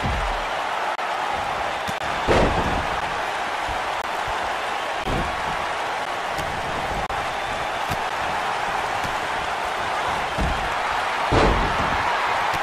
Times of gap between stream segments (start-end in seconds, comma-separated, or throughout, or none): 0.95-0.98, 1.98-2.01, 3.01, 4.02-4.04, 5.04, 6.05, 7.06-7.10, 8.09